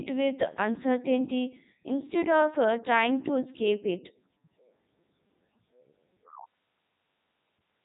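Speech passed through the Codec 2 vocoder throughout, sounding robotic and buzzy, consistent with 3.2 kbit/s; the spectrogram shows nothing above 3.8 kHz and only regular resynthesised harmonics.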